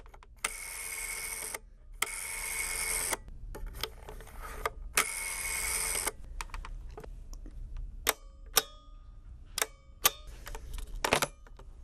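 From start to finish the sound is dull and carries a gurgling, granular grit, the kind you'd hear on low-rate digital radio. That's likely MP2 compression, which fits a bitrate around 80 kbps, with upper sub-bands dropping out and flickering while the remaining bands are coarsely quantised.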